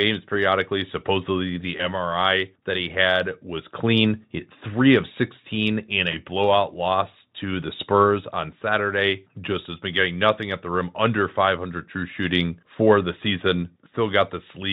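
At 1.77 to 1.87 s and again at 6.11 to 6.18 s, just before "blowout loss to the", VoIP packet loss concealed by the speech codec covers one lost 20 ms frame. The decoder stretches its last pitch and filter at falling gain, giving a brief buzzy tone or coloured noise. On a spectrogram, harmonics smear flat; the waveform envelope dips, then recovers over later frames.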